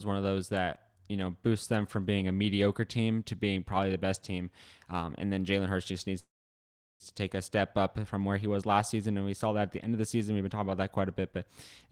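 Right after "just needs", at 6.19 s, the speech hangs in a call audio freeze until 7.03 s: a brief fading buzz, then about 0.74 s of silence. Likely delayed packets starved the jitter buffer. It resumes cleanly at "to take a step", nothing lost, just running about 0.81 s later.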